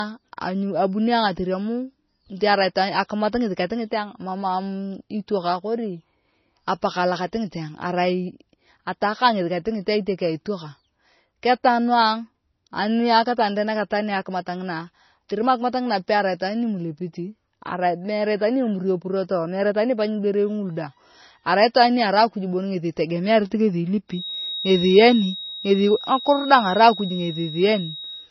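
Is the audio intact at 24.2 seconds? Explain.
No. From 24.06 s to the end of the clip at 28.31 s, a feedback whistle sits at 3.8 kHz, roughly ten decibels under the speech. It is likely a loudspeaker-to-microphone loop held just short of runaway. Unlike a steady interference tone, it swells and fades slowly in level and never grows.

Throughout the clip, including this moment, the sound carries low-bitrate audio saved at a high bitrate. Nothing is present above 5.9 kHz, and the artefacts of the first encode persist. That points to an MP3 at about 24 kbit/s, likely re-encoded at about 176 kbit/s. A single high-bitrate encode would not lose so much top end.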